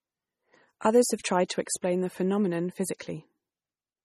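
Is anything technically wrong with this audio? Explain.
Yes. Throughout, the speech is watery and swirly, with nothing above 13.8 kHz, likely heavy MP3 compression at a bitrate around 32 kbps starving weak frequency lines. There's also pre-echo at 1.23 s, just before "tried to", and at 1.48 s, just after "have tried": the codec spreads noise across its block, so a short hiss of about 17 ms leads each attack and softens it.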